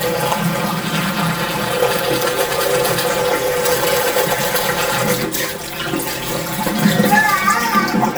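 Throughout the clip the everyday sound has a hollow, phasey colour from channel delay (comb filtering). One channel trails the other by around 5 ms, and summing them to mono cuts notches from roughly 100 Hz upward. Unlike flanging, these notches stay fixed rather than sweeping.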